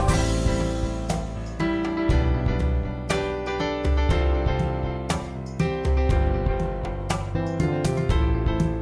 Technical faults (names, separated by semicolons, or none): none